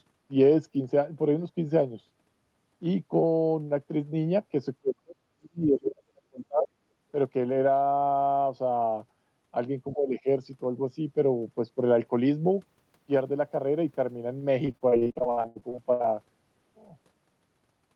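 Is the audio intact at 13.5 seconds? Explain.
Yes, the speech at 13.5 seconds is intact, with no dropout, glitch or other fault at that moment.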